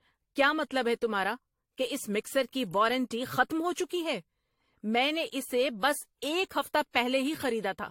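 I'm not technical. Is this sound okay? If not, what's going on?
No, not quite. All the way through, the speech has a swirly, smeared, hollow quality, and the starts of sounds feel blurred instead of crisp. The very top sparkle is gone too. That's generation loss: the audio was likely squeezed into a compressed format and unpacked again about four times over, and each round added its own small damage, which piles up into this watery, washed-out sound.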